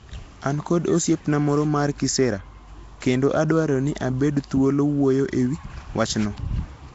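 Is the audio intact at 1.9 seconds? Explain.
No. At 1.9 seconds, as across the whole clip, the speech carries Nellymoser compression damage: a rough, hissy halo and smeared, underwater tone, with nothing above 7.7 kHz. This likely comes from coarse fixed-rate block coding that starves weak bands and fills them with noise, consistent with about 32 kbps.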